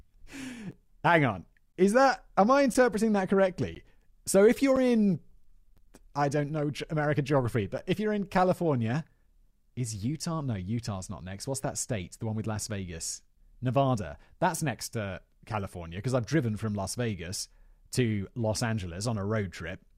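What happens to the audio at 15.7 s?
At 15.7 s the speech carries on intact, with no dropout, click or other fault at that point.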